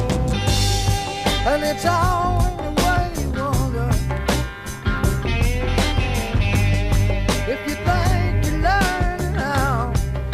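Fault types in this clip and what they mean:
Clock drift buffer slips: a click recurs every 2.02 s, about five times from 0.94 to 9.03 s, likely from two clocks differing by roughly 70 ppm, dropping or repeating a few samples. Spectrograms show evenly spaced thin vertical lines; waveforms show small jumps.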